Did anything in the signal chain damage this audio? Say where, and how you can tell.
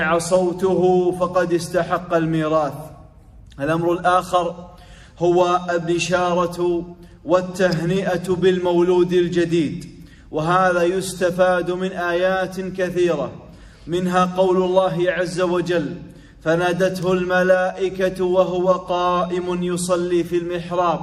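Yes. The analogue wiring likely picked up a nearby switch or motor arcing, an electrical switching spike. Each arc adds a sharp, isolated snap on top of the sound, heard once at 7.71 s and again at 17.03 s, both over almost instantly.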